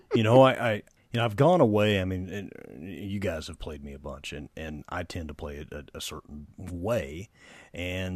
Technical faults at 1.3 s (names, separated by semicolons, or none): none